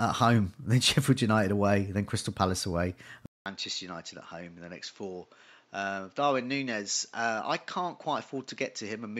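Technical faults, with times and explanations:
3.26–9.19 s, input switched to a poorer device: after a 200 ms gap the speech loses everything above 7.6 kHz, falls about 10 dB and gains a fresh noise floor roughly 35 dB below it, likely from recording moving to a narrower-band microphone.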